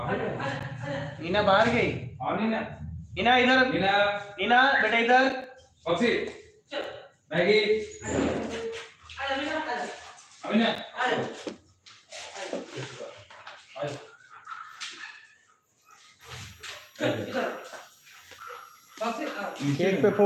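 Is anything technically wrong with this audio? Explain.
Yes. From 16.21 s to the end, a switching supply whistle appears: a faint high tone drifting between 5.6 and 5.8 kHz, from a power supply running in audible burst mode or beating with another supply. Its wandering pitch sets it apart from a steady electrical whine.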